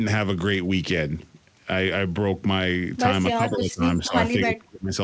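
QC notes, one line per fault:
3.33–4.14 s and 4.32–4.92 s, speech suppressed in double talk: the voice sinks by about 15 dB in the first stretch and about 30 dB in the second, roughly half a second of each affected. The likely cause is the echo canceller turning everything down while both ends spoke at once. This differs from packet loss, where gaps are abrupt and brief, because these dips track the overlap.
3.51–3.57 s, echo leak: a faint copy of the voice returns about 258 ms late at roughly 20 dB below the speech, a short scrap inside the first suppressed stretch, likely loudspeaker pickup the canceller failed to remove. Unlike room reverberation, which smears continuously, this is a separate delayed repeat. The band above 8 kHz is empty throughout, which fits the G.722 call path rather than either fault.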